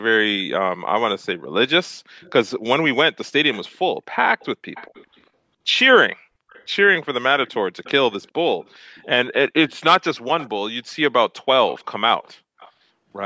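Faint delayed copies of the speech, an echo leak, surface at 2.2, 4.39, 6.49, 7.47, 9.69, 10.4 and 11.69 s. They trail about 0.4 s behind and sit roughly 20 to 30 dB down, likely residue that a speakerphone's echo canceller missed. A spectrogram shows weak, time-shifted duplicate harmonics.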